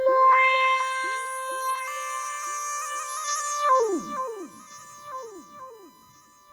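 Throughout, a steady 1 kHz USB whine sits roughly 30 dB below the signal, from the bus's 1 ms frame current leaking through power or ground.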